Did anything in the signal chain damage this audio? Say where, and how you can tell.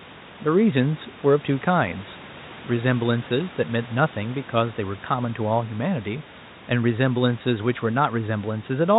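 No, nothing stood out on listening to this speech; the room noise sits about 23 dB below the voice, and the lack of anything above 4 kHz fits an ordinary G.711 call path.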